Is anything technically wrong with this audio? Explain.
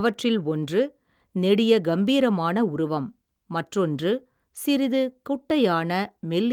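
No, nothing is technically wrong with this audio.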